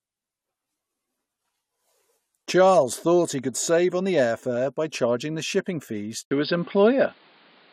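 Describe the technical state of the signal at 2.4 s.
No fault is audible at 2.4 s; the speech signal is intact at that moment.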